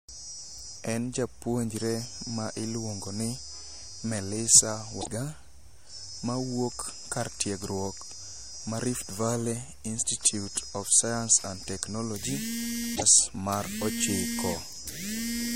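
At 4.98 to 5.09 s, and again at 12.92 to 13.03 s just after "of science and technology", damaged data in the compressed stream makes the decoder misread frames and lose sync, giving a brief glitch. Each burst lasts 0.11 s.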